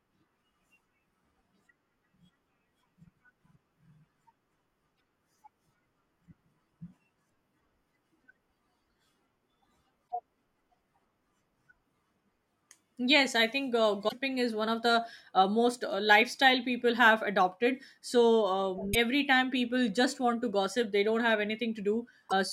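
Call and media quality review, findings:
Damaged data in a compressed stream. Short glitches, each about 50 to 80 ms, at 4.93–5.00, 10.05–10.12, 14.05–14.13 (after "I think uh"), 18.90–18.95 and 22.26–22.33 s. Decoder loses frame sync.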